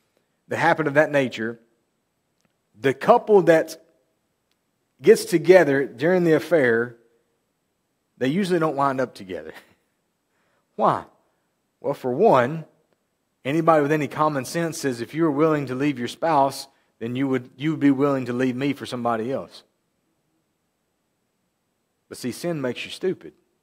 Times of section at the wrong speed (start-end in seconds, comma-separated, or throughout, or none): none